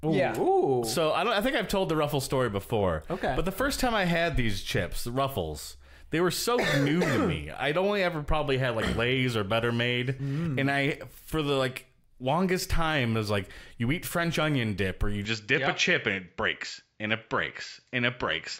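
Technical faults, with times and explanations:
15.25–18.59 s: input switched to a poorer device. The recording path likely changed to a different, lower-grade microphone partway through, and from that moment the band stops near 7.6 kHz, so the top end that gave the sound its air and crispness is gone. There is no gap at the changeover and the level stays about the same, so the switch is heard purely as a sudden dulling of tone, with a faint new noise floor sitting well below the signal.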